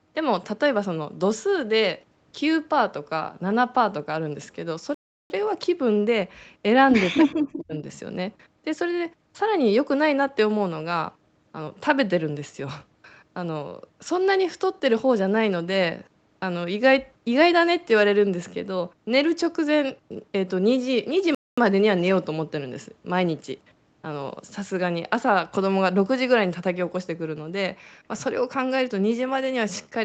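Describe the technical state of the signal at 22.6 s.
At 22.6 s the speech is intact, with no dropout, glitch or other fault, only the usual narrowed call bandwidth with nothing above 8 kHz.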